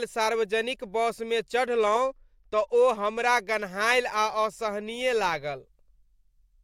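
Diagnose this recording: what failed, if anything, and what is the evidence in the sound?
The fault is a Bluetooth SBC bit pool drop, at the codec stage. From 1.70 s to 3.28 s the speech loses its treble and takes on a gritty noise, then recovers. The encoder cut its bits on a congested link. This fits a fall from 28 to 13. The top sub-bands starved and the rest were coarsely quantised.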